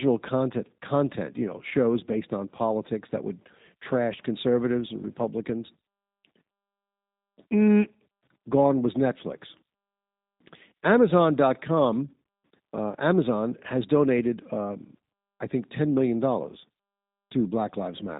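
Speech plays through a G.729 codec throughout: nothing passes above 3.8 kHz, and codec damage is plainly audible as a rough, synthetic texture from speech rebuilt out of a vocal tract filter, pitch predictor and sparse pulses, fitting 8 kbit/s. Plain band-limiting would only dull it.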